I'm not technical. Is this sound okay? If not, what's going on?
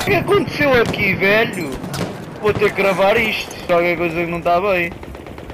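No. There are three brief glitches, at 0.07 s, 1.84 s and 3.69 s. Each is damaged data in a compressed stream: a few bytes of the file are wrong, so the player misreads that moment and must find its place again, producing a short blip.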